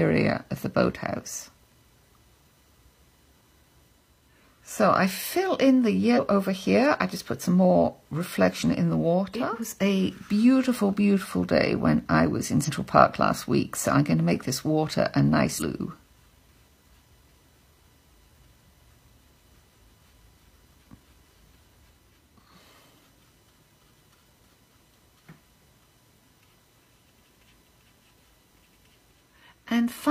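At 6.13–6.19 s, 12.64–12.69 s and 15.56–15.62 s, compressed frames are skipped. The audio jumps ahead by roughly 150, 150 and 200 ms, fitting a few 46.4 ms frames. Unlike a dropout there is no silence, just an abrupt jump at each join.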